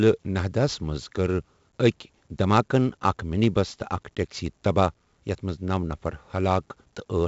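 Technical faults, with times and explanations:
Throughout, 4-bit ADPCM compression: heavy gritty hiss rides on the speech, swelling and fading with its loudness and thickest on the louder syllables, with roughness on sharp onsets. The sound is dull, with nothing left above 7.7 kHz. Each sample is stored as a coarse 4-bit step from a predicted value, so the error follows the signal and lags behind fast attacks. The missing top fits a 16 kHz sample rate, consistent with a 64 kbps stream.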